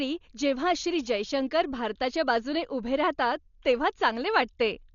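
From start to finish the speech sounds dull and boxed-in, with nothing at all above 7 kHz, and there's a rough, fluttery noise hanging around the voiced parts. That's the signature of Dolby Digital compression, likely at a very low bitrate, somewhere near 40 kbps. The encoder narrowed the band and starved many frequency lines of mantissa bits, so the decoder filled those gaps with dither noise, which is the grainy flutter you hear.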